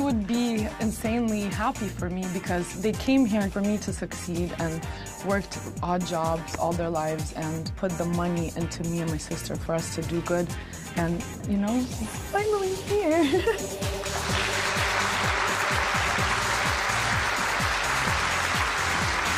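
No technical fault can be heard anywhere in the audio. Nothing in the recording points to a problem at any point.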